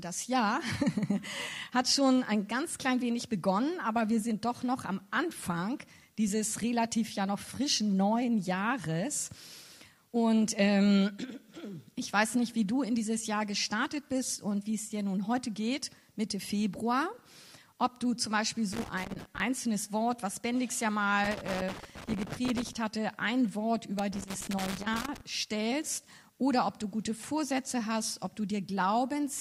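Loose connector crackle appears three times: 18.73 to 19.40 s, 21.24 to 22.76 s, and 23.99 to 25.21 s. A worn contact intermittently breaks, chopping the audio into irregular scratchy bursts. The waveform shows jagged dropouts and spikes, and the spectrogram shows scattered broadband vertical streaks.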